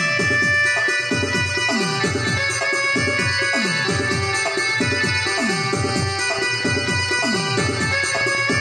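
Something in the chain, likely electrical interference from nearby equipment or a faulty connection or power supply, starts injecting short pulses into the signal at 5.89 s and keeps doing so until 8.59 s. The result is a train of clicks: around twenty near-identical pops at about 8.2 per second, spaced unevenly rather than to a steady beat. They stand out a few decibels above the sound itself and are audible over it and in its quieter gaps alike.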